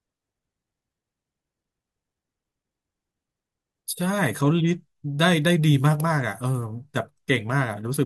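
No technical faults are audible.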